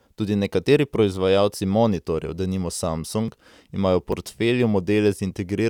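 At 3.28 s, between "nekateri proizvajalci monitorjev denimo" and "imajo v portfelju", and again at 4.12 s, just after "imajo v", the sound makes a tiny forward skip, with no gap. Each is likely a dropped buffer (overrun), losing a few milliseconds before the joined audio resumes.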